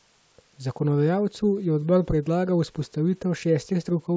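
No technical faults can be heard in this speech recording.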